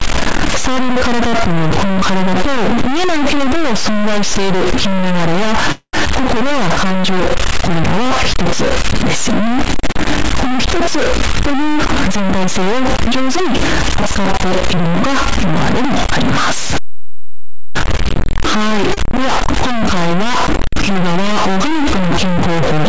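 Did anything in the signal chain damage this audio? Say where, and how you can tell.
Yes. A distortion runs through the whole clip, and the pauses are not clean; they carry a steady hiss. That points most likely to a stuck bit at the converter or in a sample-format conversion stage. One data bit is held at a fixed value, so every sample where that bit should differ is pushed off by its weight. On a waveform, small signals in the gaps sit on a jagged offset floor that flips with polarity. A spectrogram shows broadband grit under the speech and noise filling every pause.

At 5.72 s the sound hangs on as a fading buzz or hiss for about 0.23 s, with roughly 50 ms of true silence inside it, before it resumes where it left off. This is likely a call audio freeze in the network and jitter-buffer stage. Late packets emptied the buffer, so the receiver extended the last sound and nothing is missing. 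On the waveform the sound repeats and tapers into a flat stretch. The spectrogram shows a smeared, decaying band followed by a blank column.

At 6.05 s playback jumps forward. Something like a tenth of a second of speech is gone, and the two sides are butted together with only a few milliseconds of fill. This is a skip ahead, with queued audio dropped in transit or by the jitter buffer. On a waveform the cycles change abruptly at the join. A spectrogram shows formant tracks that break and restart without any gap.

From 6.46 to 7.99 s the speech drags to about 93% speed at unchanged pitch, with roughly 113 ms added. This is a jitter buffer slow-down, with the receiver repeating single pitch periods to rebuild its reserve. Vowels sound drawn out. On a spectrogram the harmonics stay at the same height but run longer. The waveform shows near-identical periods repeated back to back.

Between 11.27 and 14.01 s the speech hurries along at about 107% speed at the same pitch, with roughly 0.2 s cut out in total. 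This is a jitter buffer speed-up, in which the receiver trimmed short pitch-period chunks to shed excess delay. The spectrogram shows compressed syllables with unchanged harmonic spacing. On the waveform periods go missing at the splices, and the syllable envelopes are visibly shortened.

At 18.94 s a sound is held about 30 ms too long, with a slight buzz or dip, and then continues with nothing lost. This is a short stall from a late packet: a single packet missed its slot and the buffer stretched the last sound to cover it. A waveform shows a few repeated cycles. On a spectrogram it appears as a brief, slightly smeared horizontal extension.

The G.722 call path itself behaves as expected, with no content above 8 kHz on the spectrogram.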